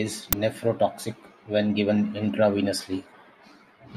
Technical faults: uninitialised buffer

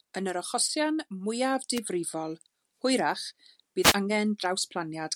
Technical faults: wireless microphone noise hit

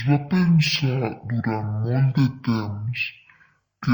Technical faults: stereo read as mono

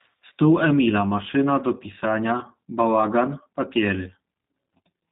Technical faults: G.729 codec

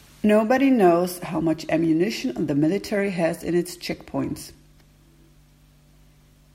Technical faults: clock drift buffer slips

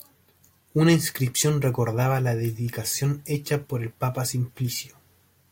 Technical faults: none

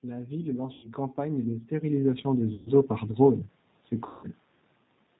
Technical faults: G.729 codec; VoIP packet loss concealed by the speech codec

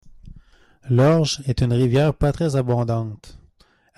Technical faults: none

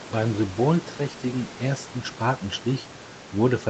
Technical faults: none

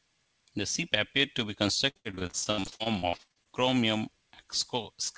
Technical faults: repeated packet loss (robotic sound)

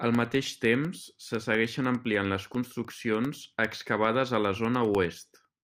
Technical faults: periodic USB or driver dropouts

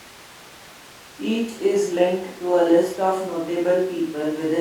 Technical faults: none

